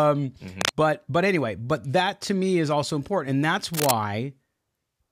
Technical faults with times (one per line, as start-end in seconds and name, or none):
0.56-0.71 cable scratch noise
3.74-3.91 cable scratch noise